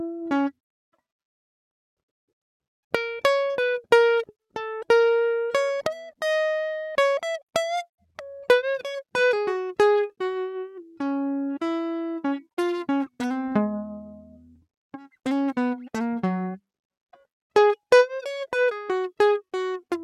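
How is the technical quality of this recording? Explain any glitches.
No technical faults are audible anywhere in this music.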